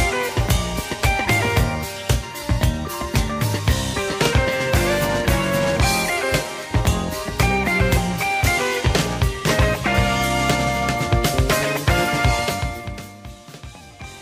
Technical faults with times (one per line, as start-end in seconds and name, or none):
none